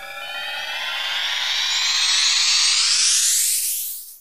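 The clip is a recording of sounds, and nothing is technically wrong with it.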